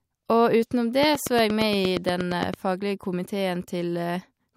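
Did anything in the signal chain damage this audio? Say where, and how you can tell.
Yes. A train of clicks ticks regularly, about 8.7 per second, from 1.03 to 2.55 s, standing well above the speech. This is likely interference pulses entering the analogue wiring.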